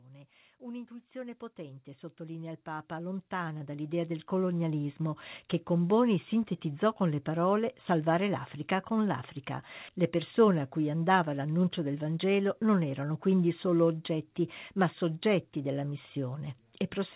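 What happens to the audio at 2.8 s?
At 2.8 s the speech and background noise are swelling together, part of an automatic gain rise of about 18 dB from 0.05 to 4.91 s, just before "che con", as the gain control judged the input too quiet.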